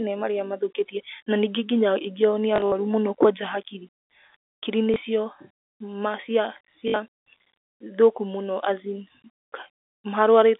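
At 2.56–2.72 s, 4.94–4.96 s and 6.88–6.94 s, packet loss with last packet repeated replays the previous chunk, which fits 20 ms packets. The runs buzz at about 50 Hz as a robotic stutter rather than falling silent.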